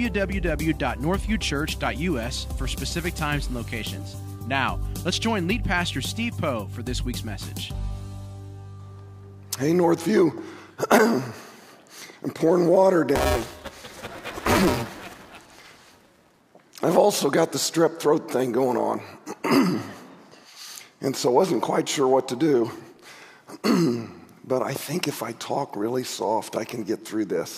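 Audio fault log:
13.15–16.41 s, buffer tearing: the software writer and hardware reader of the ring buffer have slipped into each other, so each period carries roughly a third of audio one lap old, about 5 ms stale. Its hard joins give a robotic 345 Hz buzz, which fits a 128-sample buffer.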